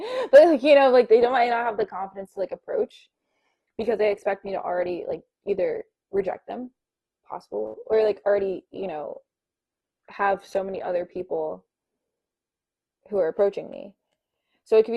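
Speech whose treble abruptly thins from 1.21 s to 13.21 s, with nothing above 12.2 kHz. This is an adaptive stream at a lower bitrate, consistent with Opus falling from 64 to 16 kbit/s.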